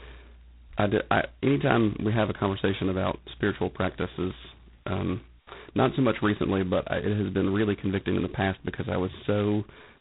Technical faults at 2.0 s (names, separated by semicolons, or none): G.726 ADPCM